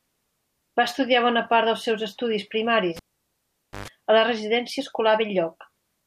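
At 2.97 s the speech is cut by a pop as the cable is pulled and plugged in again while the line is live. For about 0.86 s the signal drops to near silence with the connector out. As the plug goes back in, its tip touches first and picks up ungrounded 50 Hz mains buzz for 0.12 s. A second pop marks full contact, and the sound returns at 3.88 s.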